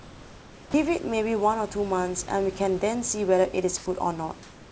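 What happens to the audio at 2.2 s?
Nothing goes wrong at 2.2 s: the audio runs through that moment intact, with no dropout, glitch or distortion.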